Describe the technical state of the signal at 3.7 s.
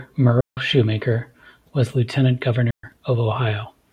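At 3.7 s the speech signal is intact, with no audible technical fault at that moment.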